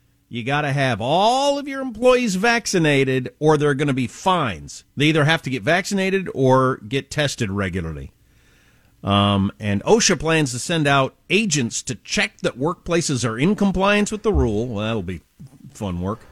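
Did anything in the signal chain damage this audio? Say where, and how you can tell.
No, nothing in the signal chain audibly damaged this speech recording at any stage.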